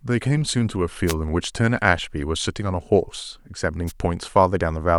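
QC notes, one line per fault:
1.06–1.14 s and 3.87–3.92 s, wireless microphone noise hit: the FM radio link fades as reflections cancel, so receiver noise rises into a brief burst of static over the speech.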